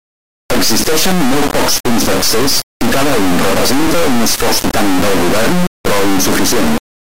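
Integer read as float throughout: the speech, apparently 32-bit integer samples decoded as float, slams between silence and the clipping limit, a loud square-wave buzz.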